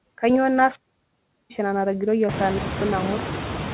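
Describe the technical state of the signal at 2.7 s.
At 2.7 s the signal sits inside a wireless microphone squelch dropout, from 2.46 to 2.90 s. The FM link fades, hiss surges, then squelch mutes for 0.23 s. The waveform shows a flat gap, and the spectrogram a blank column.

Noise suppressor artifacts run through this moment too, pulling steady noise down by about 17 dB. Room noise jumps around 2.5 s, visible as a brighter floor.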